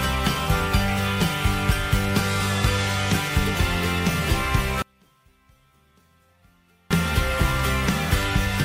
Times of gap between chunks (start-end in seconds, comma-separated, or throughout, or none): none